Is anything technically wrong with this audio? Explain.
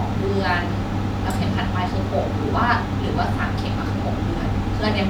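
No, nothing is technically wrong with this speech recording. No fault can be heard anywhere in it.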